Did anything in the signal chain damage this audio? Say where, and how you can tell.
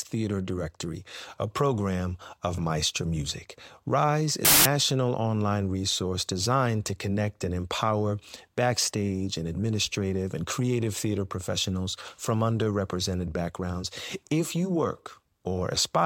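Yes. A wrong sample width fault sits at the sample-format conversion stage, from 4.45 to 4.65 s, just before "online resource designed to". The speech collapses into loud noise with the original buried inside. It runs 1.5 times too fast and too high. Data written as 16-bit integers were read as packed 24-bit, so bytes straddle sample boundaries.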